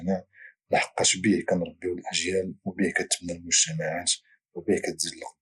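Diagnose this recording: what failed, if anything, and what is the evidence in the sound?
Throughout, the speech sounds dull, with a gurgling, granular texture as the upper frequencies flicker in and out. The fault lies in the codec stage, likely MP2 compression consistent with about 80 kbps: starved of bits, it shuts off upper sub-bands and coarsely quantises the rest.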